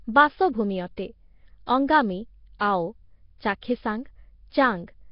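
The whole clip has that rough, hissy, underwater smear of heavy Nellymoser compression, likely at around 22 kbps, with nothing above 5.3 kHz. Then there's pre-echo at 2.59 s and 3.61 s: the codec's block noise leaks ahead of sharp attacks, so you get a brief hiss of about 11 to 13 ms before each one, softening it.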